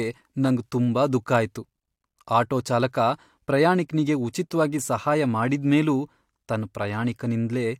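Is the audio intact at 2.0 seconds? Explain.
Yes, the audio is intact at 2.0 seconds, with the speech running through that moment without any audible fault.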